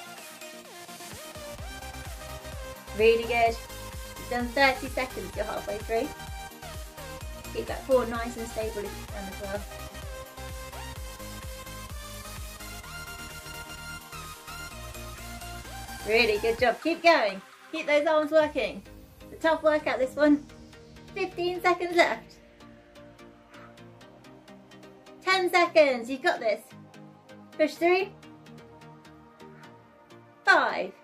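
No technical faults can be heard anywhere in this recording. Nothing in the sound points to a problem in how it was captured, processed or delivered.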